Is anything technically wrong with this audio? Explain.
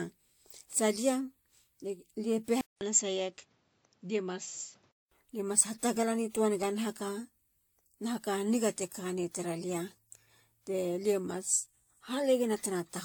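Yes. Throughout the speech, transcoding between lossy codecs is audible: two kinds of compression artefact overlap and nothing remains above 19.4 kHz. This likely reflects an AAC encode re-encoded to WMA.

From 2.61 to 5.11 s, the input likely switched to a poorer device. After a 200 ms silence, the band stops at 7.6 kHz, the level drops about 5 dB, and new background noise sits roughly 35 dB down.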